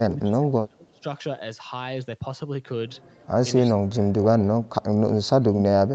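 From the start to 1.05 s, from 3.68 to 4.86 s, and from 5.05 s to the end, the speech ducks by up to about 30 dB, likely speech suppressed in double talk, with the echo canceller muting this talker while the far side spoke. Unlike packet-loss gaps, these are level dips, lasting around a second each in the first two.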